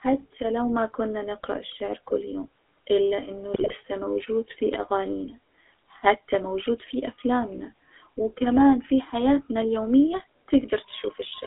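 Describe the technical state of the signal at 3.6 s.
At 3.6 s the speech is inside a burst of GSM bit errors running from 3.54 to 3.74 s. Corrupted bits reached the decoder, so its filter, pitch and gain values come out wrong, and the sound breaks into squawks, pops and gargling. On a spectrogram the burst shows as blocky columns of smeared or misplaced energy changing every 20 ms. The waveform shows sudden level jumps. The damage fits roughly nine frames being hit, which points to a heavy error rate of around 4 percent.

Beneath the burst, the whole clip carries the GSM full-rate codec, whose distortion is plainly audible. The vocal tract is modelled and driven by regular pulses, with only every third excitation sample kept, which gives a buzzy, gravelly roughness. On a spectrogram the band is confined to about 300 Hz to 3.5 kHz, with nothing above, and the harmonics look coarse and grainy. 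The sound fits the 13 kbps full-rate scheme.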